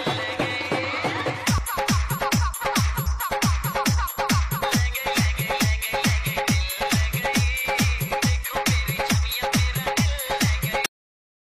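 At 3.05 s, compressed frames are skipped. A run of coded frames either never reached the decoder or was rejected as damaged, so the player leaps forward by about ten frames, consistent with a frame length near 23 ms, and roughly a fifth of a second of sound vanishes. Because adjacent frames overlap, the splice comes out as a short, smeared blip, not a sharp click, followed by an abrupt jump ahead in the sound.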